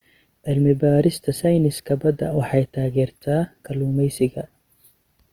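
Throughout, the speech sounds grainy and rough, likely from Opus compression in music mode filling starved bands with noise, which fits around 24 kbps, though still fullband.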